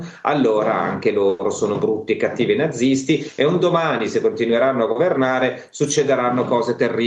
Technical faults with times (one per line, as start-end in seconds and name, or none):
1.29-1.41 call audio freeze